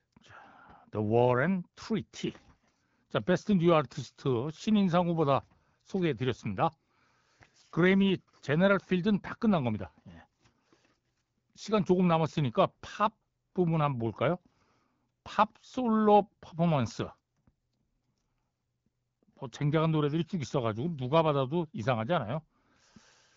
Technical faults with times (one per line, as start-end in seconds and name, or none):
none